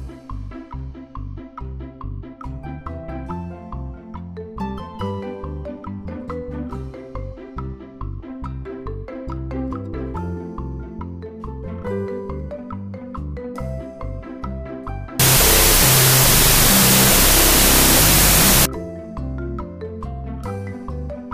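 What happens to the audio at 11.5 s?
Nothing goes wrong at 11.5 s; the audio plays through that moment intact.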